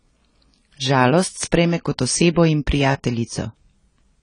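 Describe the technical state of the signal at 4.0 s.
AAC compression damage is present at 4.0 s, as it is across the whole clip. The speech is band-limited, with nothing above 10 kHz, and carries a plainly audible smeared, warbling texture with fizzy sibilants. This is likely the work of an AAC-LC encoder running at a bitrate that points to around 24 kbps: with too few bits per frame, it drops the top of the spectrum and quantises the remaining bands coarsely.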